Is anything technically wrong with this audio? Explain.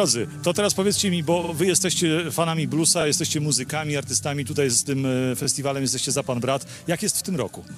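Yes, there is one fault: repeated frames between 1.43 and 1.52 s. A short block of compressed audio, about 46 ms long, is played two extra times in a row, adding about 93 ms to the clip. It sounds like a brief stutter. On a spectrogram, the same slice of pattern is tiled three times side by side. The waveform shows identical segments repeated back to back.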